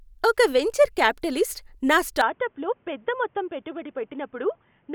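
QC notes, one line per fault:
2.21 to 4.95 s, input switched to a poorer device: just after "ఒక వెంచర్ క్యాపిటలిస్ట్ నా" the speech turns dull and boxy with no gap, nothing above 3.6 kHz, level roughly 5 dB lower, new background noise around 35 dB down, likely from recording moving to a narrower-band microphone.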